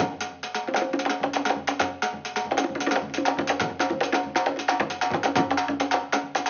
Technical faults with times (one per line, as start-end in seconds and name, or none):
none